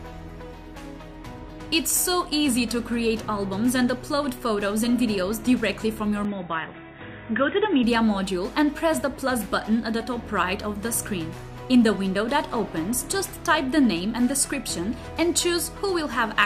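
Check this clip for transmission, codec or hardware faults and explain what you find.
One fault is present. From 6.25 to 7.84 s the band collapses to nothing above 3.8 kHz, with a faint new noise floor, no level jump and no gap at the transition. The likely cause is the input switching to a poorer device, whose narrower pickup makes the sound dull and boxy until the original input returns.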